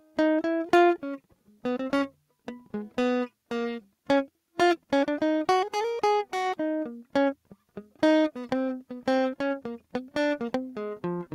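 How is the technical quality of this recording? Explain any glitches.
The technical quality of this music recording is sound, with no glitches to explain.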